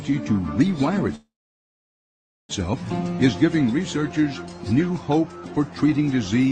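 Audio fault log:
1.15 to 2.51 s, call audio freeze: the sound briefly carries on as a fading buzz, then goes quiet for about 1.2 s before resuming exactly where it stopped. That's likely a jitter buffer running dry while packets stalled, which adds a roughly 1.34 s delay but loses nothing.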